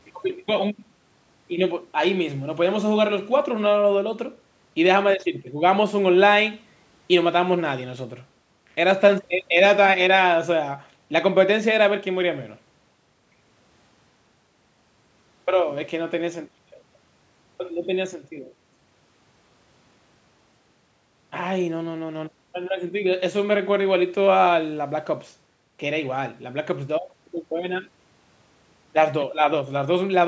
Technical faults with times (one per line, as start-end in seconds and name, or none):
none